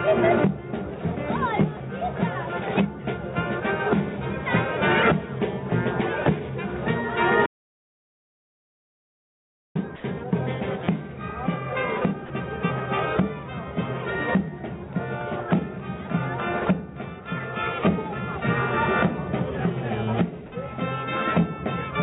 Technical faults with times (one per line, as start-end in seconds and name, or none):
7.46-9.75 audio dropout to silence
9.96-10.04 sound dropped by the voice detector
12.26-12.30 sound dropped by the voice detector
20.46-20.52 sound dropped by the voice detector